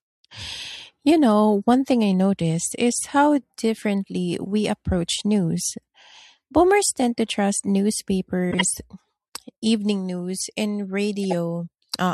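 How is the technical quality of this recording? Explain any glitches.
The speech has two short glitches, both from a corrupt frame being decoded. At 8.51 to 8.64 s there's a loud, harsh burst peaking around -5 dBFS. At 11.24 to 11.33 s, right after "evening news and", a shorter and somewhat quieter blip follows. In each case flipped bits in the compressed data threw off the gains and codes, and the decoder played the damaged frames anyway. That puts energy at the wrong frequencies for a handful of frames and then only a few, so you hear it as a chirpy, noisy squeak.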